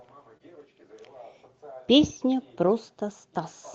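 Short concealed packet loss at 0.37 to 0.41 s: about 20 ms of audio arrived too late, so the receiver extended the preceding sound, leaving a brief smear.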